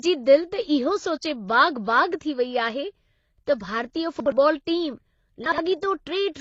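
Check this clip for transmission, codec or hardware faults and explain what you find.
Two faults are present: a codec-damaged sound throughout and two brief jumbled moments in the speech.

Transcoding between lossy codecs: throughout, nothing is heard above 7.6 kHz, with layered swirly and smeared artefacts. This is likely AAC-LC followed by HE-AAC, not one codec, given the mixed artefact types.

Chunks out of order: from 4.2 to 4.32 s and from 5.46 to 5.58 s, a 60 ms chunk plays one slot late, producing garbled, jumbled moments. Unlike a dropout, no sound is missing.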